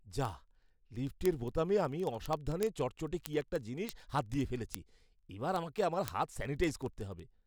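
From 0.1 s to 7.46 s, word clock ticks run under the speech as a fast, evenly spaced train, about every 40 ms. The receiving clock drifts several hundred parts per million from the sender's, slipping one sample per tick. Steady spacing distinguishes it from random crackle.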